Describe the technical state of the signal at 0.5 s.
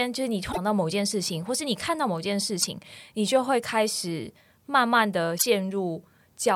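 At 0.5 s the speech is hit by damaged data in a compressed stream, from 0.49 to 0.58 s. Corrupted bytes make the decoder misread those frames and lose sync while it hunts for the next valid header. The result is a brief chirp or squawk.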